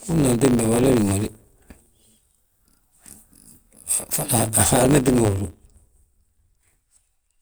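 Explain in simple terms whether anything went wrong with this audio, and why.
A block size mismatch (truncated) discards each chunk's tail throughout, adding a 100 Hz buzz and making the speech 1.09 times faster with the voice's timbre kept.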